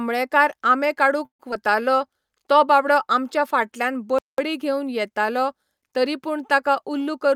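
From 1.25 to 1.41 s there is a call audio freeze: the sound thins into a fading buzz that falls silent for about 110 ms, then resumes exactly where it stopped. This likely comes from packets held up in transit, draining the jitter buffer. About 140 ms is inserted and nothing is lost, unlike true packet loss.

Just after, from 1.51 to 1.54 s, a short concealed packet loss shows up as a brief smear. About 40 ms of audio never arrived and is dropped, with only a tiny synthetic bridge covering the join. Playback jumps forward and wins back roughly 40 ms of delay.

From 1.72 to 2.08 s a jitter buffer slow-down stretches the audio to 91% speed at unchanged pitch, adding 37 ms. Repeated pitch periods and pause fragments rebuild the buffer's reserve, so sounds are drawn out rather than cut or gapped.

At 4.19 to 4.38 s a playback stall cuts the sound dead in mid-flow for about 0.2 s. The cause is likely the player starving for data or a blocked output thread. 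Unlike the earlier freeze, there is no fading tail: the output simply goes silent, then continues.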